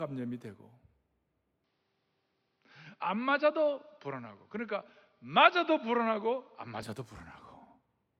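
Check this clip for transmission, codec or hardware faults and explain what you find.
One hardware fault is present in this speech clip. From 1.64 to 6.82 s, the input likely switched to a poorer device, whose narrower band cuts everything above 6.1 kHz, dulling the sound without a gap or level change and adding faint noise.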